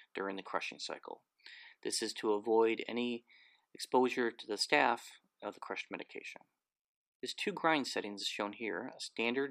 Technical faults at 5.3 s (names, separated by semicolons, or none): none